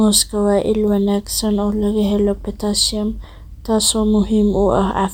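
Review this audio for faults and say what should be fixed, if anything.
Nothing to fix: no faults are audible anywhere in the speech.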